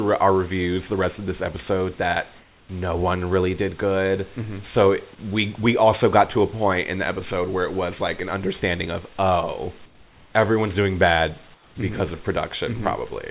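Between "of this episode that" and "no one really did", 2.39 to 2.69 s, the room background gives way to comfort noise: flat, featureless hiss about 4 dB quieter, likely the sender's voice detector pausing transmission. After "it was like an", from 8.85 s to the end, a feedback whistle sits at 4.5 kHz, roughly 10 dB under the speech. It's a thin tone that swells and fades slowly, likely from a speaker-to-mic loop hovering at the edge of feedback. Comfort noise returns at 9.86 to 10.34 s and 11.54 to 11.75 s, each time about 3 dB down and smoother than the real room.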